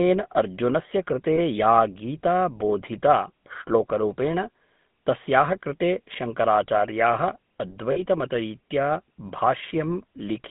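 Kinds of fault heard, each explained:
GSM full-rate codec: The speech is rebuilt from a vocal-tract filter driven by sparse, regularly spaced pulses. This gives a plainly audible buzzy, gravelly roughness throughout. The band runs from about 150 Hz to 3.6 kHz, consistent with a 13 kbps full-rate coder.
lost GSM frames: Where frames went missing, the decoder repeated the last good frame, leaving a brief rough, metallic ring instead of clean speech. This occurs at 1.36 to 1.39 s, fitting one 20 ms frame, and at 7.92 to 8.02 s, fitting two frames.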